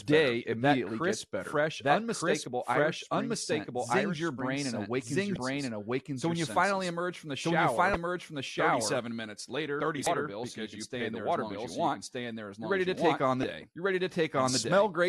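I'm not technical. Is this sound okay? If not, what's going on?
No. The whole clip has a doubled audio track: a second, equally loud copy trails about one second behind, likely from the sound being captured twice.

There is also damaged data in a compressed stream, heard as short blips at 5.33 s (after "brain and awakens your"), 7.92 s (after "finally emerge from the"), 10.03 s (between "minutes later" and "bill so you can") and 13.40 s.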